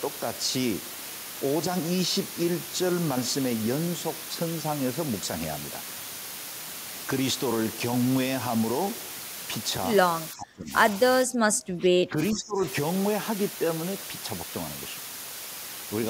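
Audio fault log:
throughout: low bit depth with dither. A loud, steady, even hiss sits only about 10 dB below the speech. The sound points to roughly 4-bit resolution with dither spreading the rounding error into white noise.
10.32–10.73 s and 11.24–12.63 s: speech suppressed in double talk. The speech sinks by around 25 dB, likely from an echo canceller ducking the talker while the far side also spoke.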